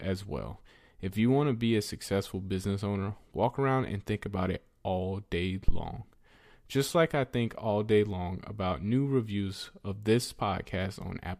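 At 5.68 s a phantom power thump interrupts the speech, lasting until about 5.85 s. A supply was switched on or off on the live input, and the sudden voltage step passed through the coupling capacitors as a deep low-frequency bump peaking near -12 dBFS, dying away with a decay of roughly 37 ms. On a waveform it shows as a single large asymmetric swing that settles back to centre; a spectrogram shows a dark smear confined to the lowest frequencies.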